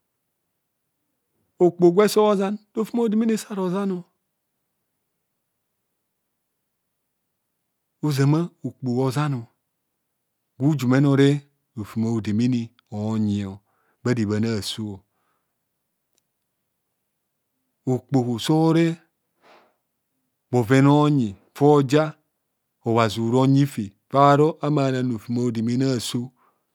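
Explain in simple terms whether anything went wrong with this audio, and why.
Nothing went wrong here: no faults can be heard anywhere in the speech.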